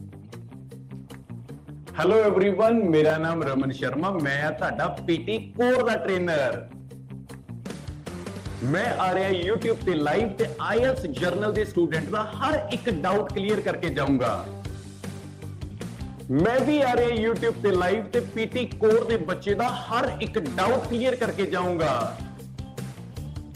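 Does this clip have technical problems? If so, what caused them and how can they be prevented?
No, there are no technical problems to report here.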